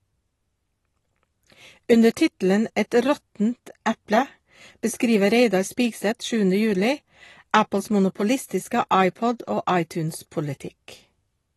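From start to finish the speech sounds dull and smeared, with a warbling, fizzy edge on sibilants and nothing above 12 kHz. This is likely AAC compression, an AAC-LC encoder squeezed to roughly 32 kbps, trimming the top band and coarsely quantising what remains.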